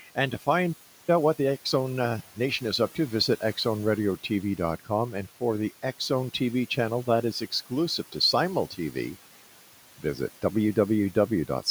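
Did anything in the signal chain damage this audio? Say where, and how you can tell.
Yes. Call processing added noise suppressor artifacts throughout. The room noise, about 19 dB below the speech, drops by about 12 dB in the gaps and swells back under each phrase. The suppressor lowers its estimated noise bands frame by frame.

At playback, the sound cuts out at 0.72 s and stays silent until 1.09 s, a gap of about 0.35 s. It then resumes mid-flow. The likely cause is a playback stall, with the player starved of data or its thread blocked.

Right after that, from 1.09 to 2.47 s, time-compressed catch-up sets in. The speech runs at about 1.25 times normal speed with unchanged pitch. The player is trimming its backlog by cutting and cross-fading short slices.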